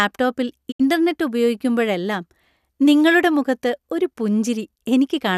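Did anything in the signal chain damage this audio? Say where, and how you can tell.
Yes. A digital broadcast dropout at 0.70 to 0.81 s. The receiver stopped getting valid frames and muted, so the speech fades out over about 20 ms, leaves roughly 72 ms of silence that fits a few lost frames, then fades back in. That stretch of programme is gone.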